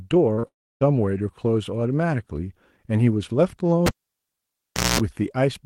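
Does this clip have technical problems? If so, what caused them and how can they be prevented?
Yes. There are two short concealed packet losses, at 0.33–0.39 s and 0.39–0.45 s, each losing about 40 ms. The receiver papered over the gaps by extending the preceding sound, so you get a quick smear or wobble. A jitter buffer with a bit more headroom, or forward error correction, would help.

Right after that, from 0.47 to 0.83 s, the sound turns into a fading synthetic continuation and then near silence. It picks up again with roughly a third of a second gone. That's likely a long network dropout. A steadier connection, such as wired rather than Wi-Fi, is the best prevention.

From 3.86 to 5.00 s you can hear a cable pulled and plugged in. There's a pop, then about 1.1 s of near silence with roughly 0.2 s of 60 Hz mains buzz as the tip makes partial contact, and a second pop when the sound returns. 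Secure or locking connectors, plus not touching cables mid-take, would prevent it.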